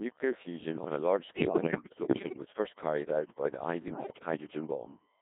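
A steady, thin whine at 1 kHz sits about 35 dB below the speech throughout. This is USB whine, where the bus's 1 ms frame current leaks in through power or ground.

The speech is also robotic and buzzy for its whole length, confined to roughly 150 Hz to 3.7 kHz and heavily damaged. This is the Codec 2 vocoder, whose sound points to its 1.6 kbit/s mode, rebuilding the voice from pitch, voicing, energy and spectral envelope alone.

From 1.36 to 2.42 s, between "fusion on a large" and "first carried out", and again from 3.88 to 4.26 s, the voice lurches in pitch and level into warbling gibberish. These are bit errors on digital voice radio, with roughly one bit in ten flipped.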